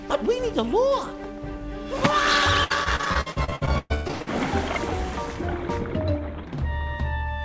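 Between 2.64 and 4.28 s the audio breaks up into repeated packet loss with a robotic character. Sound keeps dropping out and being patched by extending the last fragment, so nearly half of that stretch is filled-in material rather than the original, with the longest hole lasting 119 ms. On a waveform this shows as a choppy envelope with short, suspiciously regular repeated cycles. On a spectrogram it appears as a run of frozen, smeared horizontal bands interrupting the normal texture, all sitting beneath a hard ceiling at 8 kHz that fits a G.722 wideband call path.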